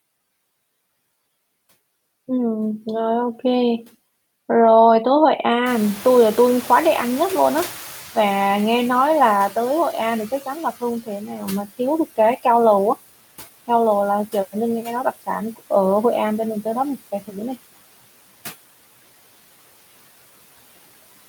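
Noise suppressor artifacts run through the whole recording: the suppressor cuts background noise by about 16 dB, frame by frame, so the noise sinks in pauses and rises back under the speech. Around 5.5 s the room noise jumps by about 21 dB, to about 18 dB below the speech. From 5.65 to 10.51 s the noise suppressor is catching up. Its noise estimate lags that rise, so the louder background comes through with less reduction before settling about 12 dB lower over roughly 4.86 s. At 11.27 to 11.42 s the noise suppressor cuts speech, mistaking about a tenth of a second of it for noise and pulling it down by up to about 7 dB, so that moment sounds swallowed and faint.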